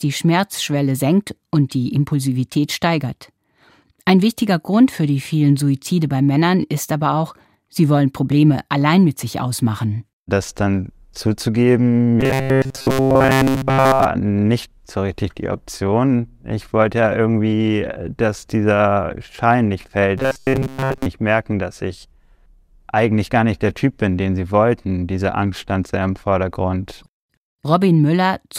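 Right after "dann zuzugeben", from 12.21 to 14.06 s, the speech turns into robotic sound from repeated short buffers: a stiff 133 Hz buzz throughout, likely from a 7.5 ms chunk looping. It returns at 20.18–21.06 s, over most of that span, before "merken dass ich".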